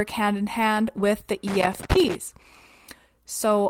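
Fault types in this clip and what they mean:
Lost packet rebuilt from error correction: A missing packet was replaced by the lower-bitrate redundant copy carried in the following packet, so playback continues without a gap while the substituted stretch is coarser and noisier. It occurs twice in this speech clip, at 0.99 to 1.01 s and 1.95 to 1.97 s. Each rough patch lasts 20 ms, consistent with a single lost frame, and the second one sits inside the crackle burst.
Loose connector crackle: An intermittent contact in the signal path rapidly breaks and restores the connection, chopping the audio and adding pops wherever DC is present on the line. Here it appears as one irregular burst of scratchy crackle from 1.47 s to 2.15 s, lasting about 0.7 s. The second 20 ms error-correction patch at 1.95 s falls within this burst.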